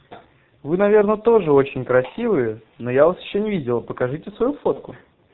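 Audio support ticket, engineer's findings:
Speech path through G.723.1 codec, heavy damage throughout. Low-rate encoding, consistent with the 6.3 kbit/s mode, with a slow-updating voice model and nothing kept above 4 kHz. Result: muffled, hoarse speech, consonants smeared, no crisp high end anywhere in the clip.

VoIP packet loss concealed by the speech codec, 4.73 to 4.79 s. About 30 ms missing, which fits a single lost 30 ms frame. Decoder extrapolated from the last pitch and filter at falling gain. Audible as a brief, fading smear, with weak, distorted speech continuing just past the gap while the decoder recovers.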